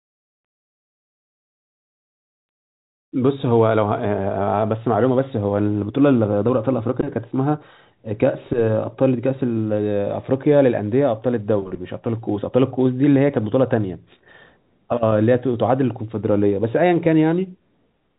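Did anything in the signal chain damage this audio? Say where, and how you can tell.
No, nothing along the way has damaged this speech; it's just carried over a normal G.711 telephone path, so the sound stops at around 3.8 kHz, as you'd expect from a phone line.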